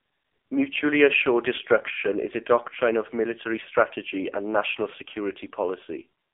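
From start to finish the speech has been squeezed through the AMR narrowband mobile codec, and heavily. There's no high end at all: nothing survives above about 3.7 kHz, and the low end thins out under roughly 300 Hz, giving that classic phone-line band. The codec rebuilds the voice from a vocal-tract model fed by sparse pulses, and here it sounds buzzy and synthetic, which fits one of AMR-NB's lower modes, around 5.9 kbps.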